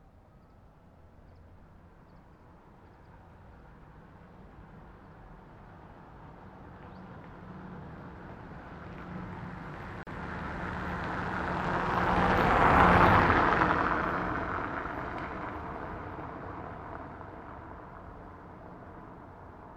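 A recording of sounds with one gap at a join of encoded pieces. At 10.03 s the continuous sound drops out for about 38 ms, returning at 10.07 s. The edges of the silence are smeared by the codec. Afterwards the sound resumes exactly where it left off. This points to two separately encoded sections spliced without trimming. The encoder's start-up delay and final-frame padding were both left in at the join.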